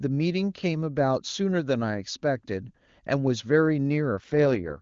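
A speech clip carried over AMR wideband (HD Voice), where the link appears to force an AMR rate drop from 4.17 s to the end. The codec is pushed from its clear top mode down to one of its lowest, which fits a fall from about 23.85 to 6.6 kbit/s, with the freed bits spent on error protection. The band stays the same and there is no gap, but the voice turns rough, raspy and synthetic for the last 0.65 s.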